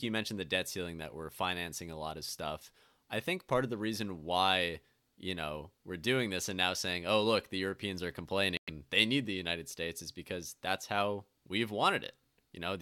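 At 8.57 s the speech cuts to silence for 107 ms, resuming at 8.70 s just before "they need the". This is likely a Bluetooth stall: delayed radio packets left the headphone buffer empty, so playback halted until the retransmitted audio arrived.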